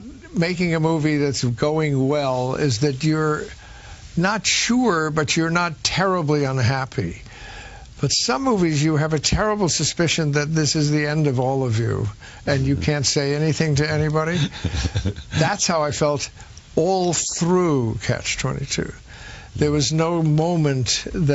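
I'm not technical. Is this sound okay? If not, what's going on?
Yes, nothing wrong can be heard.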